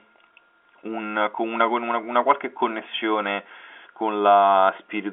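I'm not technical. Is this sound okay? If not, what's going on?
Yes, no faults; the narrow, phone-line quality, with nothing above about 3.7 kHz, is simply how normal G.711 telephone coding sounds.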